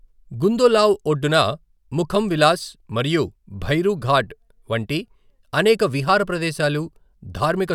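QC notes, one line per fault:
No faults heard.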